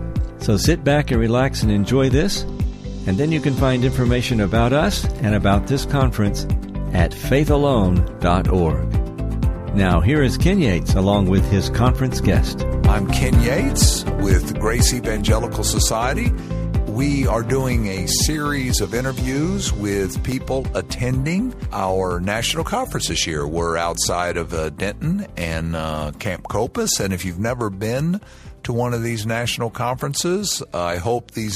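At 20.32 s, a 2.9 ms block of digital silence, consistent with an unfilled 128-sample buffer, ticks; the waveform drops flat, the spectrogram shows a thin vertical stripe.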